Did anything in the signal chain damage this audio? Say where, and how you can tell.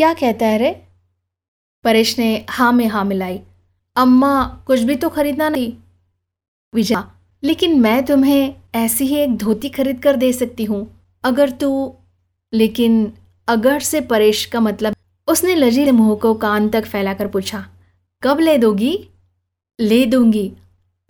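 Yes, compressed frames were skipped at the codec or storage stage. The speech jumps forward at 5.55, 6.95, 14.93 and 15.86 s. The losses of about half a second (0.7 s at 14.93 s) point to runs of 92.9 ms frames that never played.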